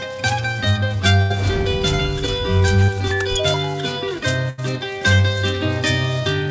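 At 1.22 to 1.32 s and again at 4.50 to 4.60 s, a burst of packet loss leaves an 80 ms hole. The last sound is stretched and faded, then the audio jumps on. At 2.84 s, a short concealed packet loss patches about 40 ms. It is heard as a brief smear before the audio blends back. Nothing reaches above 8 kHz, which fits a G.722 call codec.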